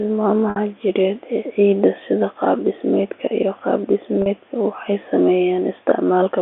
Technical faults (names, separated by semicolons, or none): packet loss with pitch repetition